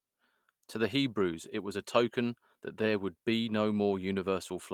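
Speech, with one lost packet rebuilt from error correction at 2.85–2.87 s: a rougher, noisier 20 ms frame from a low-bitrate copy, showing as a brief smeared, grainier patch on the spectrogram with no waveform gap.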